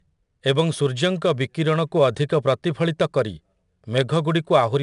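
4-bit ADPCM compression runs through the whole of this speech clip, from start to finish. Each sample is coded as a coarse 4-bit step away from a predicted value, so the quantisation error rides along with the signal as a plainly audible gritty hiss on the louder speech. Nothing is heard above about 10.6 kHz, which points to a reduced sample rate near 22 kHz and fits a stream of around 89 kbps.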